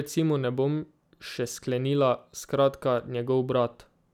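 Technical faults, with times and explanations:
No technical faults are audible anywhere in this speech recording.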